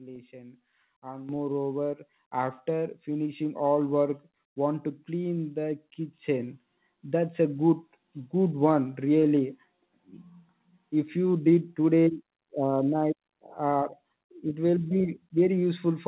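Microphone volume stepped up at 1.29 s, then again at 2.31, 3.33, 5.37 (just after "want to") and 6.39 s. Each time the call software judged the input too quiet and raised the device gain in a single jump, about 9 dB at first and about 2 dB at each later step. Speech and background noise get louder together, in a staircase of steps one to two seconds apart, over a call path that carries nothing above 4 kHz.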